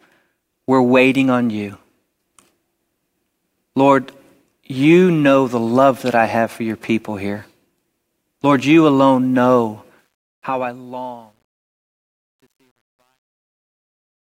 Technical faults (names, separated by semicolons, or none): truncation distortion on a fade